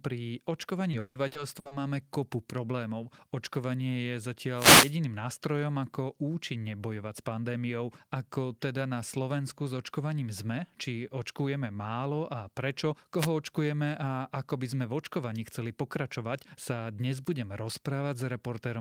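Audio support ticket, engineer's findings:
Repeated packet loss (robotic sound), 0.91 to 1.73 s. Network path dropping or delaying packets six times in under a second; concealment repeats the last audio to cover each hole, about 340 ms filled in total, longest single gap 160 ms. Roughly 41% of that stretch is patched rather than real. Result: choppy, robotic speech with pieces missing. Probable component: jitter buffer/network link upstream of the decoder.

Wireless microphone noise hit, 4.54 to 4.95 s and 13.18 to 13.29 s. Analogue FM radio link fading as reflected signals cancel at the receiver; receiver noise rises as the carrier weakens. Heard as a short swish of static over the speech, the first hit lasting about 0.4 s, the second about 0.1 s. Probable component: wireless mic transmitter/receiver path, antenna placement or diversity.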